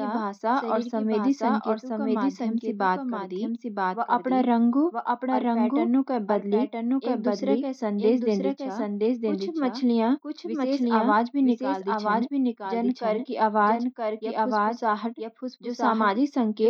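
Speech carrying a doubled audio track throughout: a full-band copy, about 5 dB quieter, trails roughly one second behind with no reverb tail, likely from a second, slower capture path. On a spectrogram, every pattern reappears about a second later, fainter.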